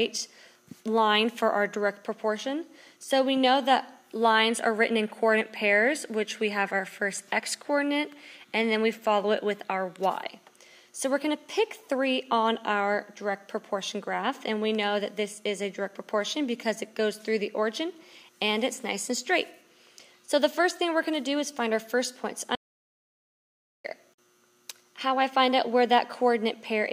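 An audio dropout to silence runs from 22.55 to 23.84 s. The sound cuts off mid-flow into silence, with no room tone, for about 1.29 s, then returns abruptly. The likely cause is the input being lost while the recorder kept writing zeros.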